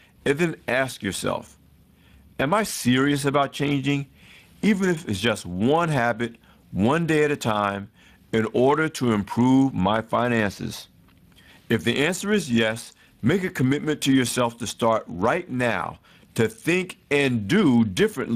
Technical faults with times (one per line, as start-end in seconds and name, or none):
0.00-18.35 Speex codec